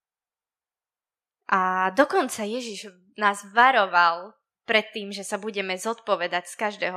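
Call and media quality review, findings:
No faults found in this speech recording. Nothing to escalate for this clip.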